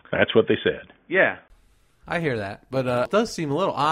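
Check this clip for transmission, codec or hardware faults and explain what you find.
One fault is present: the input appears to switch devices partway through the clip. From 0.0 to 1.5 s the speech has nothing above 3.5 kHz and sounds dull and boxy, with faint background noise about 45 dB below the speech. At 1.5 s there is a brief silence of about 20 ms, after which the full bandwidth returns and the speech sounds clear, at roughly the same loudness. The likely cause is an input switched to a poorer device, such as a headset in its call profile, whose narrow passband and own noise floor shaped the opening segment.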